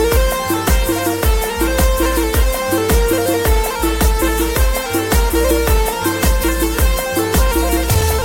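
Nothing in the audio stood out as a fault on listening.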